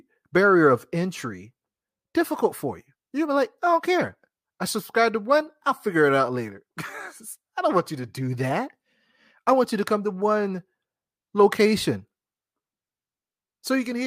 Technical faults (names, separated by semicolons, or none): none